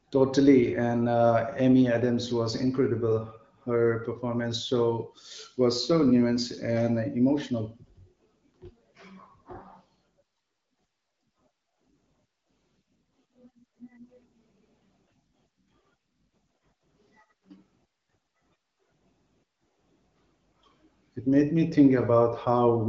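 No technical faults can be heard in the speech. It passes through an AMR wideband (HD Voice) codec working as intended, with only a light coding texture and nothing above 7.6 kHz, which fits one of the codec's higher rates near 16 kbit/s.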